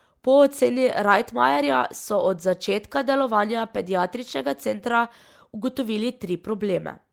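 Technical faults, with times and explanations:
No technical faults are present in this speech clip.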